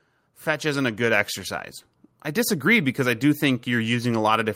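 From 0.59 to 1.37 s, automatic gain rising lifts the speech and background together by about 4 dB. The gain control judged the input too quiet and raised it gradually. It happens again from 2.07 s to the end, as both swell steadily louder.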